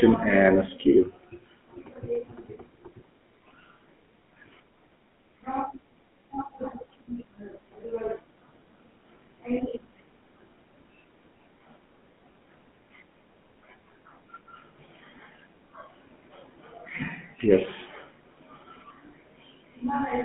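Throughout, GSM full-rate codec damage is plainly audible. Sparse regular-pulse excitation makes the speech buzzy and gravelly. The band runs 150 Hz to 3.4 kHz, which fits a 13 kbps codec.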